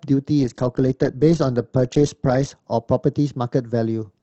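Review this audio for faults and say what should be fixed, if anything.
No faults turn up in this audio, so nothing needs to be fixed.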